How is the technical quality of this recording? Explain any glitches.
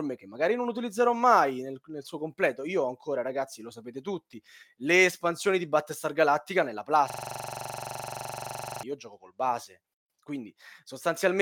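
The recording has one clear fault: a system hang loop from 7.10 to 8.83 s. The speech before and after it is unaffected.

During that stretch the computer or audio driver stopped supplying new data while the sound hardware kept replaying its ring buffer. A 42.67 ms segment, which fits a 2048-sample buffer, repeats 41 times at 23.4 Hz, producing a rapid mechanical stutter. On a waveform this appears as identical blocks tiled end to end. On a spectrogram it shows as a column pattern repeating every 43 ms, with energy bunched into a comb of lines spaced 23.4 Hz apart.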